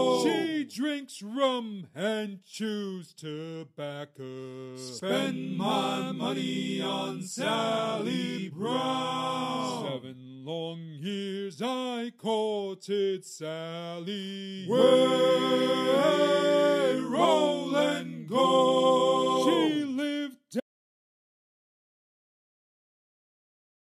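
At 20.60 s the sound cuts off mid-flow into silence, with no room tone, and stays silent through the end of the clip, about 3.4 s. This audio dropout to silence likely comes from the input being lost while recording continued writing silence.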